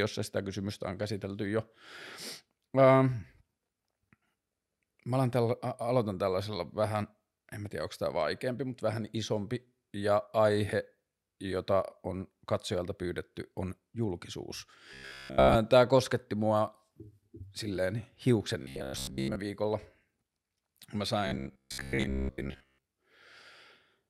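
Speech with robotic sound from repeated short buffers at 14.93–15.56, 18.62–19.36 and 21.27–22.84 s: a rigid 66.7 Hz buzz, likely from looping 15 ms chunks, shows as evenly spaced harmonic stripes and periodic waveform repeats.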